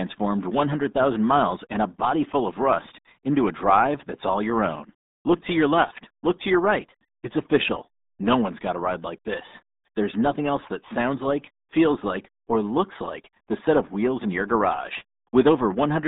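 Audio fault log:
Throughout: RealAudio 14.4 codec. The speech is squeezed into a narrow telephone-style band of roughly 200 Hz to 3.7 kHz, and heavy coding damage leaves it muffled and gargly, which fits a very low-rate speech codec of about 8 kbit/s. On a spectrogram, energy stops abruptly near 3.9 kHz with empty space above and little below 200 Hz. Smeared, blotchy formants show where the coder has crudely rebuilt the speech frame by frame.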